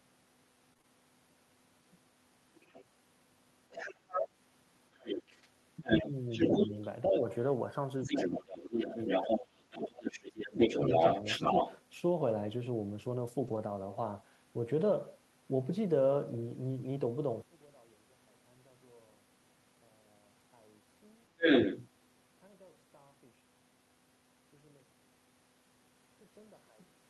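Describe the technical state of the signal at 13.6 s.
Right around there, from about 13.47 to 13.57 s, you're hearing a lost packet rebuilt from error correction. The roughness points to a few packets going missing, about 60 ms worth, with the decoder filling the hole from the low-bitrate backup copies that Opus tucks into each following packet. So the speech never drops out, but that stretch comes through grainier and noisier than what surrounds it.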